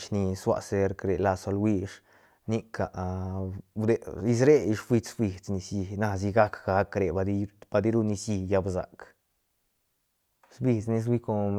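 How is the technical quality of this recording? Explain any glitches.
No glitches can be heard anywhere in the recording. There is nothing here that needs explaining.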